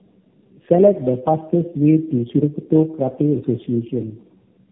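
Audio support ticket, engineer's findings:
Tandem speech coding, throughout. Rough, muffled, warbly speech; nothing above 3.6 kHz. Sounds like three low-rate speech codecs in a row, likely G.729A twice then AMR-NB, bridged by G.711 at each border. Each decode and re-encode stacks fresh coding error on the previous hop's degraded output.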